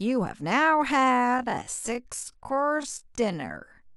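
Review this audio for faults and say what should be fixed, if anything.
Time-stretched section from 1.0 s to the end: the pace abruptly drops to about 0.55 times normal speed while pitch stays put, so the speech drags, likely from software lengthening the audio by repeating short pieces. Prevention: stretch less, or fit timing with edits instead of heavy time-stretching.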